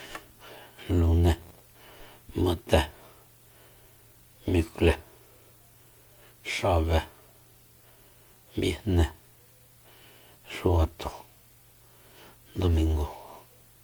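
Generation loss runs through the whole speech clip. The signal was likely decoded and re-encoded around four times, and the character points to MP3 at about 128 kbit/s. Each pass lands on a shifted frame grid and quantises again, so the errors stack. The result is a swirly, hollow texture with smeared consonant attacks, rougher than one encode at that rate would give, and there is nothing above 20.9 kHz.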